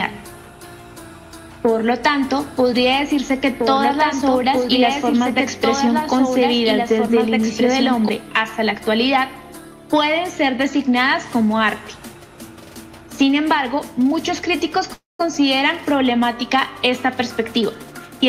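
Three faults are audible. From 2.23 to 8.09 s a doubled audio track plays: a full-band copy about 5 dB quieter trails roughly two seconds behind, most likely from a second capture path, showing as repeated spectrogram patterns. At 14.93 to 15.21 s a call audio freeze fills 259 ms, a fading buzz or hiss then about 170 ms of silence, likely from an emptied jitter buffer. Nothing is lost, so everything after it arrives late. From 17.39 to 18.22 s a jitter buffer speed-up runs the sound at 110% with pitch unchanged, trimming about a tenth of a second, visible as cut-out waveform cycles.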